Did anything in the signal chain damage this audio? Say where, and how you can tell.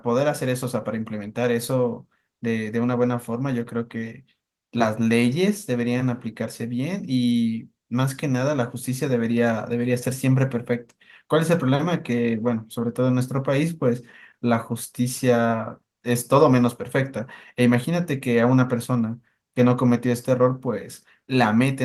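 No, nothing in the chain has harmed this speech. It passes through Opus voice compression at 24 kbps in hybrid mode, which keeps the full audio band and leaves only a light trace of coding texture.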